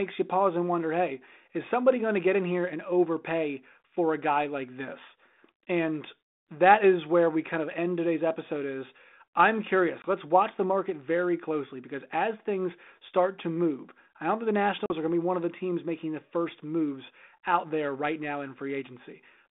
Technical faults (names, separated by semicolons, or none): packet loss on an ADPCM call